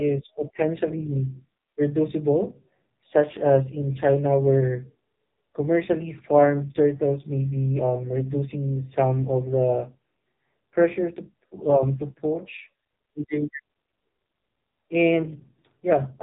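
AMR narrowband mobile codec damage runs through the whole recording, from start to finish. Nothing above 3.8 kHz survives, so the speech sounds boxed-in and telephone-thin, with sibilants dulled. The codec rebuilds each 20 ms frame from a vocal-tract model excited by a handful of pulses, and the damage here is heavy: a buzzy, synthetic edge sits on the voice, consistent with one of the lowest AMR-NB modes, around 5.9 kbps.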